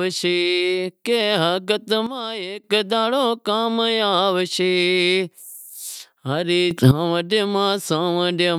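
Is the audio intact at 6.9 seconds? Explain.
No. A sudden gain jump runs from 6.71 to 6.91 s, so 6.9 seconds falls just inside it. The level steps up by about 11 dB from one sample to the next, with no ramp, and the speech and the background noise rise together. This likely comes from a digital gain setting or bit shift applied instantly. The abrupt jump makes the speech suddenly louder for about 0.2 s.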